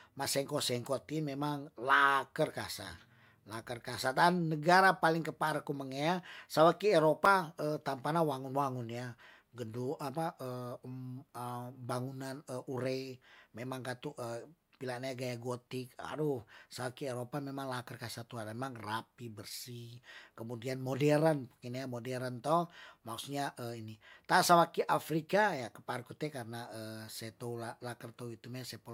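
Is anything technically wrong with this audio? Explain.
Yes. There is one fault in this speech recording. At 7.25 s there is a block of digital silence, about 5.3 ms long. For that instant the signal drops straight to silence, which fits a 256-sample buffer left unfilled. The sound stops and restarts with no fade. Because the gap is so short, it is heard as a tick or dip rather than an audible hole.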